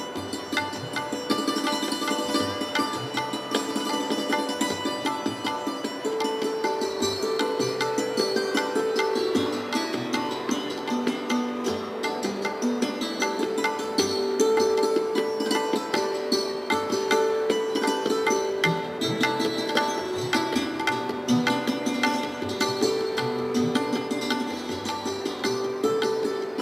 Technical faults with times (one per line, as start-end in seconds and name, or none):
none